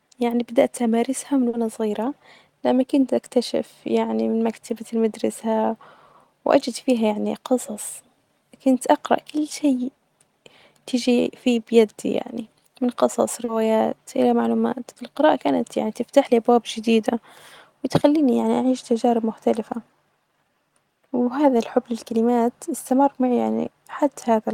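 Brief smears break the speech at 1.49 to 1.54 s and 13.44 to 13.49 s, each 40 ms, and a shorter one at 23.63 to 23.65 s, about 10 ms. These are short concealed packet losses: the decoder filled each missing gap by extending the preceding sound, then blended back into the real audio.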